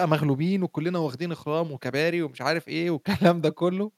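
No technical faults can be heard anywhere in the speech recording; the signal stays steady and continuous throughout.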